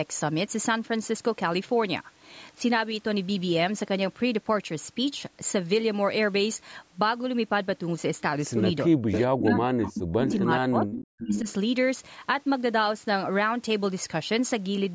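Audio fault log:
8.85–9.10 s and 9.26–11.48 s, speech suppressed in double talk: the speech drops sharply, as far as roughly 40 dB down, while the far side talks. This is likely the echo canceller ducking everything it cannot separate. The level falls away rather than gaining any extra sound.
9.11–9.20, 9.39–9.59, 9.84–9.93, 10.25–10.39, 10.91–10.98 and 11.20–11.53 s, echo leak: a second, delayed copy of the speech appears about 0.45 s behind the original. It ranges from about 15 dB below the speech to about equal level. The likely cause is a loudspeaker echo that the canceller failed to remove. Unlike the suppression, this adds a repeat rather than taking sound away.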